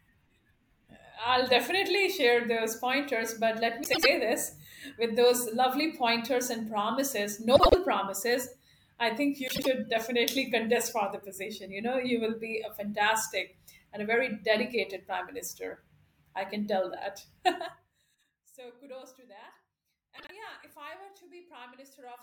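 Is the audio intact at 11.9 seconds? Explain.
Yes, the speech is intact at 11.9 seconds, with no fault at that moment.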